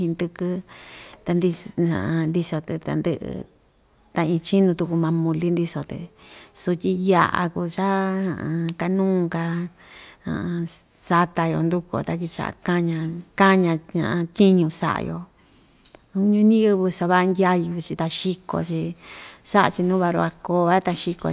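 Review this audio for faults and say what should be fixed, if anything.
Nothing stood out on listening to this speech recording, so there is nothing to fix.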